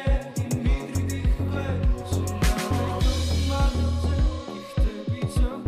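No technical faults are audible.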